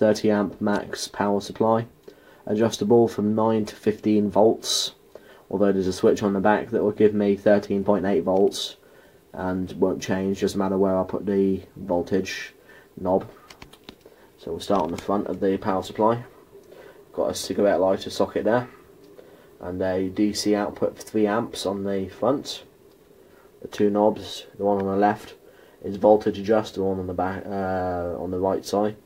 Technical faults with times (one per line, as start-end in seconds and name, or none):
none